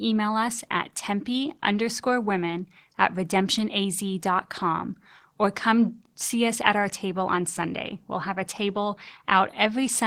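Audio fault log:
Throughout: Opus voice compression, clearly audible at a low rate near 16 kbps; the hybrid coder's coarse excitation coding leaves the speech hoarse and slightly robotic.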